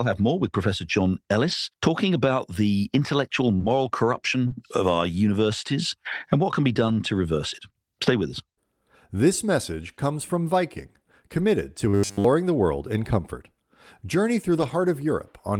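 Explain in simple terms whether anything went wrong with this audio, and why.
At 1.47, 3.60, 4.50, 6.88, 11.38 and 14.58 seconds the voice briefly turns rougher and noisier, without any gap. This is a lost packet rebuilt from error correction: pieces of the call went missing, and the decoder played a lower-quality backup copy carried in the following packet.

At 3.57 and 4.48 seconds there is a brief smear or wobble lasting a couple of hundredths of a second. This is short concealed packet loss: about 20 ms of audio arrived too late, so the receiver stretched the preceding sound to cover the hole before blending back into the real signal.

From 11.89 to 12.25 seconds the voice becomes a rigid, metallic buzz at about 100 Hz that still loosely follows the speech. This is robotic sound from repeated short buffers. The likely cause is fresh audio arriving too slowly, so the software kept looping a tiny 10 ms slice instead of playing new sound.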